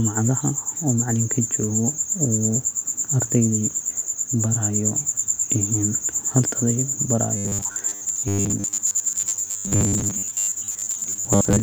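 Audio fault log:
7.37–11.63 s, robotic sound from repeated short buffers: a rigid 100 Hz metallic buzz, likely a 10 ms chunk replayed while most real audio is skipped.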